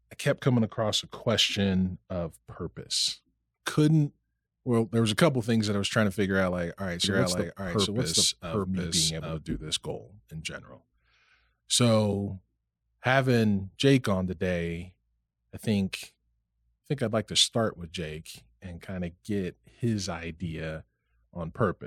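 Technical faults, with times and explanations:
7.04–9.38 s, doubled audio track: a dry second copy trails about 0.7 s behind at similar level, likely from a slower capture path or out-of-step edit.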